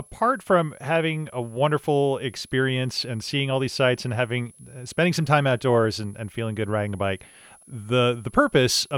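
Speech runs under a switching supply whistle for the whole clip: a thin high tone, wandering between about 10.5 and 10.9 kHz and sitting roughly 30 dB below the voice. A switching power supply running in audible burst mode or beating with another one is the cause. A spectrogram shows it as a wavering horizontal line near 10.7 kHz.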